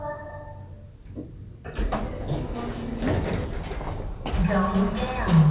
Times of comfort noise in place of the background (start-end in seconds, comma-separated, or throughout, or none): none